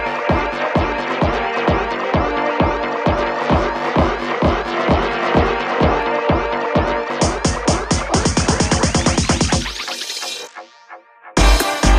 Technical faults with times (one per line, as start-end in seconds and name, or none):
3.23-6.03 doubled audio track